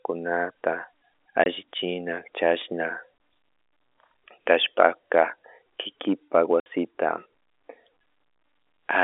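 Packet loss filled with silence cuts the speech at 1.44 to 1.46 s, 3.18 to 3.20 s and 6.60 to 6.66 s. The receiver had nothing to play for those stretches and inserted digital silence, so each gap opens and closes with a hard edge. The first two holes last 20 ms and the third 60 ms, which fits 20 ms packets, one lost in each of the first two and three in a row in the last. The narrow telephone band of the G.711 line is audible throughout.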